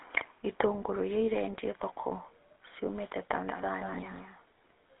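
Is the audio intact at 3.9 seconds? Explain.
No. At 3.9 seconds the speech carries two faults at once. Every syllable has a buzzy, gravelly roughness, and the sound is boxed into a narrow telephone band from about 200 Hz to 3.6 kHz, with nothing at all above 3.8 kHz. That is the GSM full-rate codec, and the damage is plainly audible. The codec rebuilds speech from a vocal-tract model driven by regularly spaced pulses and keeps only a thinned-out excitation. That coarse excitation is what grinds the voice, and the sound fits a 13 kbps GSM full-rate stream.

This moment also falls inside a doubled audio track that begins abruptly at 3.35 s and runs to the end of the clip. A second, somewhat quieter copy of the same speech trails the original by about a fifth of a second. It sounds like a flat, hard echo with no decay or room colour. The likely cause is the audio being captured a second time through a slower path, or an edit that left two out-of-step copies mixed together.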